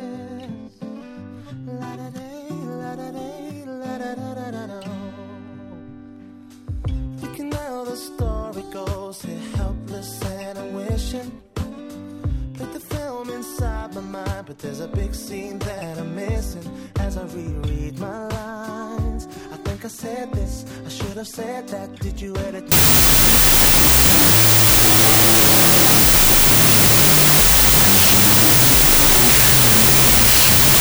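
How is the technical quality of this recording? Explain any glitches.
The recording is clean up to 22.72 s, then breaks down with a wrong sample width fault that lasts to the end at 30.81 s. From there the audio becomes loud, harsh noise with the original sound buried underneath, playing at half speed and pitched an octave low. That fits 32-bit float data being read as 16-bit integers. Each true sample gets split into two false ones, which halves the speed, and many of those values are garbage built from mismatched byte fragments. A simple sample-rate error would also drop the pitch, but it would stay clean rather than drowning in noise.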